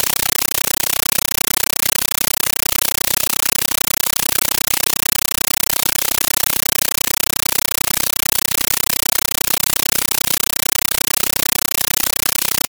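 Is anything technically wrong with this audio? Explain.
Yes, the whole thing is a compressed stream played as audio, from start to finish. The speech is gone, replaced by loud chattering static. What's happening is an AC-3 bitstream being treated as plain samples instead of being decoded. Each frame comes out as a burst of noise about 9.3 ms long followed by silent padding, repeating 31.25 times a second, which fits a 448 kbps stream. That steady burst-gap rhythm is the telltale buzz.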